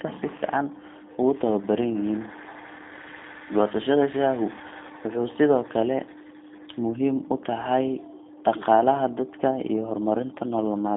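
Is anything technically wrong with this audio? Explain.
Yes. Throughout the whole clip, the speech has been through a G.729 codec, here the G.729A variant at 8 kbit/s. The codec models each short frame as a vocal tract filter driven by a pitch predictor and a few pulses. It discards the rest. The band runs from about 200 Hz to 3.6 kHz, and nothing above 3.7 kHz survives. The voice sounds narrow, muffled and telephone-like. The codec damage is plainly audible as a rough, slightly synthetic buzz.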